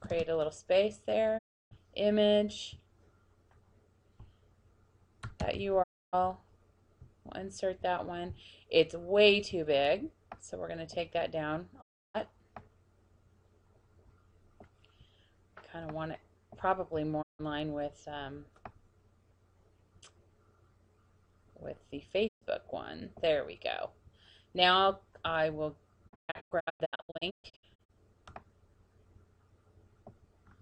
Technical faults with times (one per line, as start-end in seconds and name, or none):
1.37-1.73 digital broadcast dropout
5.82-6.15 digital broadcast dropout
11.80-12.16 digital broadcast dropout
17.21-17.41 digital broadcast dropout
22.27-22.43 digital broadcast dropout
26.07-27.91 digital broadcast dropout